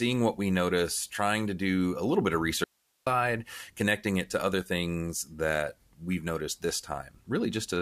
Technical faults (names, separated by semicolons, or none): audio dropout to a faint residue